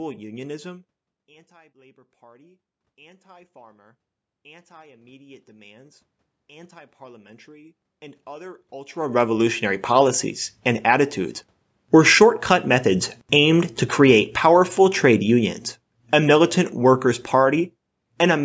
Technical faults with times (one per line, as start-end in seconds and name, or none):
1.48-11.45 automatic gain rising
13.15-18.40 automatic gain falling